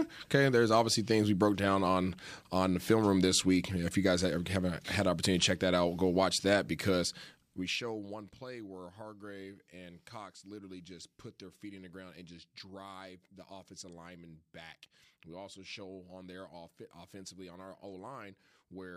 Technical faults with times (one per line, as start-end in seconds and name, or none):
none